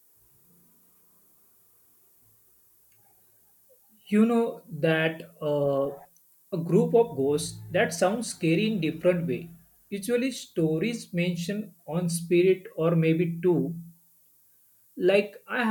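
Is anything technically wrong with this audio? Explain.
Yes. The speech carries low bit depth with noise shaping from start to finish. The samples are stored with only 10 bits, so each value is rounded coarsely. Instead of leaving that rounding error flat, the system feeds it back and pushes it toward high frequencies. The result is a steady, thin hiss that grows much stronger toward the top of the band. It sits roughly 35 dB below the speech and never lets up between phrases.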